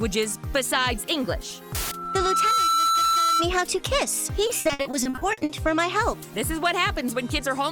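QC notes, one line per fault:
1.74–3.49 s, loudspeaker feedback squeal: a single 1.3 kHz tone swells over roughly 0.7 s to a piercing squeal about 5 dB above the sound. A microphone is hearing the loudspeaker it feeds, and at that frequency the loop gain exceeds one, so the tone keeps growing.
4.47–5.51 s, repeated packet loss (robotic sound): the audio turns choppy, broken by a rapid run of short dropouts up to 60 ms long. Lost or late packets keep recurring, and each hole is patched by extending the last sound. About 40% of this stretch is filled-in rather than real.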